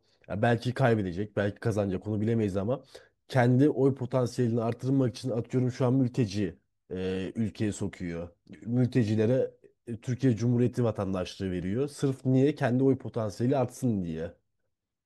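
No technical faults occur in this speech recording, so there is nothing to describe in time order.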